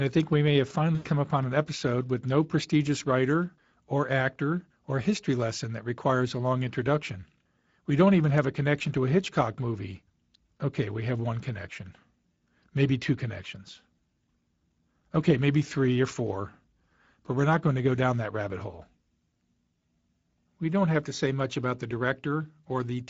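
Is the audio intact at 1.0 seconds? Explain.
No. From 0.95 to 1.09 s the speech smears into a stretched, buzzy tone or coloured noise that fades away, and it stays weak and distorted for a short while after the gap ends. This is VoIP packet loss concealed by the speech codec. Packets went missing, and the decoder filled the hole by repeating its last pitch and filter settings while lowering the gain frame by frame. The gap amounts to 100 ms of lost audio, or five 20 ms frames. Because each decoded frame depends on the one before, the damage continues for tens of milliseconds after packets return.

At the same moment, and throughout the clip, the speech is noisy and hoarse. That is the Speex codec. This CELP speech coder has too few bits to describe the excitation signal accurately, so the fine detail of the speech is replaced by a rough approximation. The damage is plainly audible, which fits a mid-level Speex setting around 16.8 kbps.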